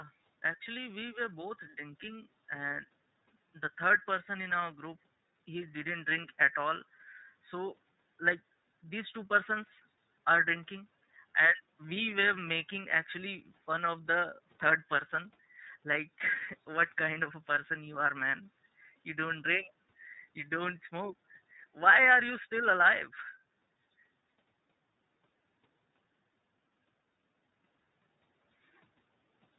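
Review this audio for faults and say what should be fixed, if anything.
The iLBC codec runs through the whole speech clip. Each 30 ms frame's excitation is coded on its own, which fits the 13.33 kbps mode. The result is plainly audible roughness and a synthetic edge. A spectrogram shows a hard ceiling at 4 kHz, with nothing above it. To prevent this, use a wideband codec such as Opus instead of iLBC.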